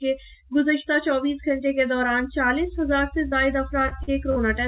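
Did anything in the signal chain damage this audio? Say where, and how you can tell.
Yes. Short concealed packet loss at 3.28 to 3.35 s, a network-stage fault: about 40 ms of audio never arrived in time, and the receiver's concealment filled roughly 37 ms of it by extending the preceding sound, then crossfading back into real signal. You hear a brief smear or wobble where continuity should be. The band is already capped at 4 kHz, consistent with a G.711 mu-law call path, which is working normally.

Repeated packet loss (robotic sound) from 3.80 to 4.39 s, also a network fault: four separate gaps, the longest 45 ms, with about 124 ms patched in total, roughly a fifth of that stretch. Each hole is bridged by continuing the last sound, and the next loss follows before the audio settles, so the passage turns choppy, with fragments missing between the synthesised fills.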